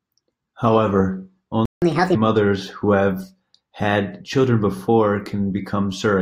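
At 1.65 s the speech just stops dead for about 165 ms, up to 1.82 s. That's a playback stall, most likely the player running dry or its thread getting blocked, so nothing reached the output until it recovered. You hear a clean hole in mid-flow rather than a fade, and then the sound picks up again.

Right after, from 1.82 to 2.15 s, there's catch-up at higher speed. The player chews through its backlog by resampling at 1.5 times normal rate, so everything runs fast and the pitch jumps up by roughly seven semitones. It sounds briefly chipmunky and rushed for about a third of a second, then snaps back to normal speed and pitch once the lost time is made up.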